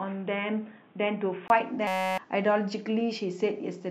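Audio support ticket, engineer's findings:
Input switched to a poorer device, 0.0–1.5 s: dull, band-limited sound, nothing above 3.8 kHz; added background noise roughly 35 dB under signal, level unchanged. 20 ms gap at 1.5 s as full band returns. Likely a headset call profile or secondary mic selected, then released.

System hang loop, 1.87–2.18 s: steady 188 Hz buzz. One 5.33 ms slice replayed 57 times, fits a 256-sample ring buffer. Driver/host froze while hardware kept cycling the buffer; roughly 300 ms of sound lost.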